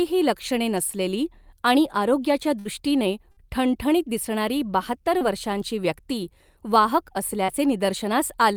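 Bursts of packet loss hit this speech recording at 2.59–2.67 s and 3.31–3.39 s, the second just before "ठणठणीत दिसणारी बहात्तर वर्षांची". Each time about 60 ms of audio went missing, and the receiver extended the preceding sound for about 57 ms, fading it into a held buzz or hiss before speech resumed further on. Short concealed packet loss appears at 5.19–5.23 s, between "ठणठणीत दिसणारी बहात्तर" and "वर्षांची व्यक्ती वाहक", and at 7.45–7.50 s, after "बहात्तर वर्षांची व्यक्ती वाहक". Gaps of 20 and 40 ms were patched by continuing the last sound and blending back, heard as a brief smear or wobble.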